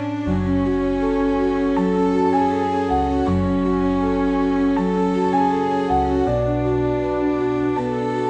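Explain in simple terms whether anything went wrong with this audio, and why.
Nothing went wrong with this audio, so there is no problem to explain.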